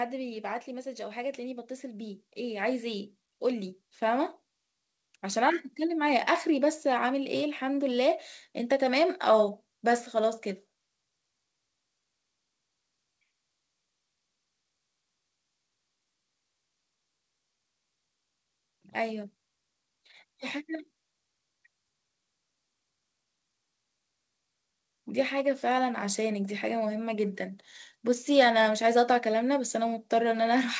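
From 0.66 to 7.89 s, automatic gain rising lifts speech and background together by about 12 dB, as gain control compensates for a quiet input; the 8 kHz top reflects the call codec.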